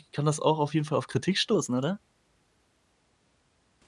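From 1.55 s to 2.93 s the speech shows a wrong sample rate fault. Playback runs about 9% fast, which fits 22 kHz material clocked out at 24 kHz without conversion. Pitch rises by 1.47 semitones and pacing hurries in step, so the passage sounds slightly higher and rushed.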